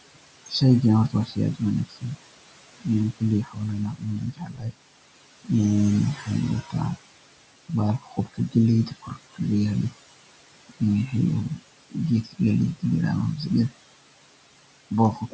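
Noise suppressor artifacts run through the whole clip. The suppressor pulls the steady room noise down by about 21 dB, frame by frame. The background sinks in every pause and swells back under the speech.

Speech cut by the noise suppressor follows in six stretches: 0.15–2.18 s, 2.8–4.75 s, 6.15–6.98 s, 7.69–9.93 s, 10.69–13.73 s and from 14.91 s to the end. Mistaking quiet speech for noise, the suppressor ducks it by up to about 22 dB, swallowing soft consonants and word endings, worst around 2.8–4.75 s.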